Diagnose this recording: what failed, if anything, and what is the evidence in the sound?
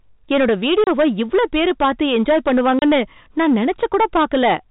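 Every loud syllable carries a harsh, gritty fuzz from start to finish, the mark of hard clipping at a gain or converter stage. The level is pushed about 11 dB past what that stage can pass, so around a tenth of the samples hit the ceiling and are sliced flat. Those squared-off peaks add harmonics that the G.711 telephone coding carries faithfully within its band below 4 kHz.

The speech drops to dead silence twice, at 0.84 to 0.87 s and again at 2.79 to 2.82 s, each hole having hard edges. Both gaps last 30 ms, which fits a single lost network packet each time. This is packet loss filled with silence: the receiver had nothing to concealment-fill the missing span and simply played silence.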